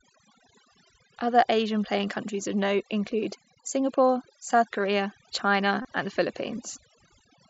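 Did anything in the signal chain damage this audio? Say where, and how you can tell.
Yes. Throughout the clip the background collapses to near silence with small twinkling specks. That points to overdone noise removal at the call-processing stage. The suppressor was set so strongly that any frequency band near its noise estimate was pulled far down or shut off entirely. Quieter parts of the speech fell below that threshold, so they were removed along with the noise.

A second fault sits on the Bluetooth link between headset and phone, from 5.82 to 5.85 s. For about 22.5 ms there is a brief buzzy, tonal stretch held at full level, with a slight warble where the real signal resumes. This is concealed Bluetooth headset packet loss, consistent with roughly three lost frames. The receiver covered the gap by repeating the best-matching piece of the preceding waveform. The mSBC headset codec on this link adds only its light graininess.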